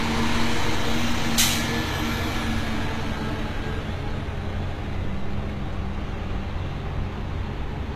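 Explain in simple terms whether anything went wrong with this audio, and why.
Something did go wrong, and it lasts the whole clip. The treble sounds bright but false. High sounds come across gritty and metallic. Nothing is heard above about 14.9 kHz. The likely cause is HE-AAC compression at a low setting. This codec stores only the lower part of the sound properly. It then fakes the top end by copying lower bands upward. Those copied highs don't quite match the real ones, which gives the rough, tinny edge.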